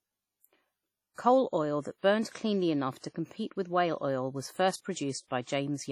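Throughout the speech, a ringing, washy smear with hiss that breathes alongside the signal, likely WMA compression at a low bitrate, which fits about 32 kbps.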